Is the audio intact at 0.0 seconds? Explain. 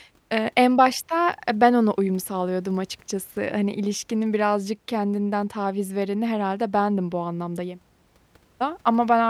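Yes, the audio is intact at 0.0 seconds, with no fault audible at that moment.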